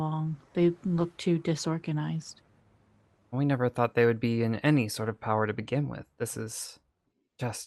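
Across the speech, the timing feels faintly unsteady, with small hitches that never settle. This is clock drift between sender and receiver: the sending side's clock runs about one and a half percent slow, so audio arrives a little more slowly than it is played out. The receiving jitter buffer keeps drifting toward empty and has to keep compensating, so the irregularity is spread across the whole clip rather than sitting at one point, even though the Opus call path itself keeps its band up to about 12 kHz.

From 0.03 s to 6.97 s the hitches become slight stretches and tiny repeats at uneven spacing, with the pace dragging to roughly 98% of normal. These are repeated timing corrections: to stay in step with the slow sender, the receiver keeps duplicating short pieces of audio, always in the same direction. Together they add around 0.15 s to that stretch, and each one is small.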